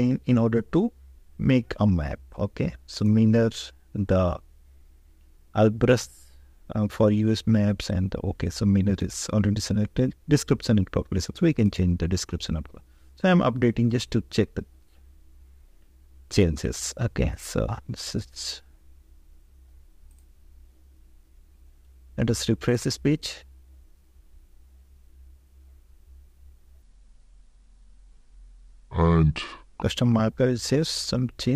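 Near the end, from 26.83 to 29.82 s, a section at the wrong speed plays back at about 0.66 times its proper rate. Everything in that stretch turns slow and deep. The pitch falls by roughly seven semitones, tied to the slowdown. At 29.82 s the audio snaps back to normal speed and pitch. The likely cause is an editor or player running that segment against the wrong clock, stretching it in time instead of preserving its original rate.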